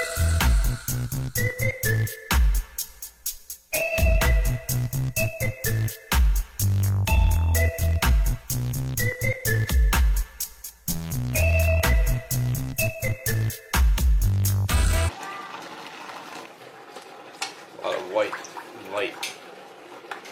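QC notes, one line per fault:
15.04–15.10 s, stream segment skipped: the sound jumps ahead with a brief blip instead of pausing, likely from a failed segment load that the player skipped.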